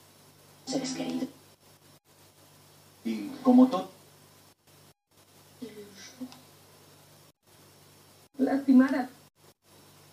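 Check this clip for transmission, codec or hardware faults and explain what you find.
Nothing audible points to a transmission, codec or hardware problem anywhere in the clip.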